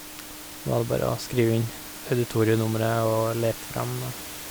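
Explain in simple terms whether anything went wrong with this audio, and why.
Nothing went wrong here; the speech comes through just as it should, and the quiet background sound you might notice sitting well underneath it is simply the room where the microphone was, not a problem with the system.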